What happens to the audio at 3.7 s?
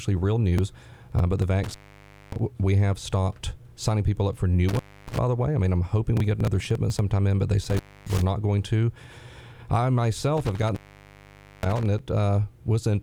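Nothing goes wrong at 3.7 s; the audio plays through that moment intact, with no dropout, click, distortion or other audible fault.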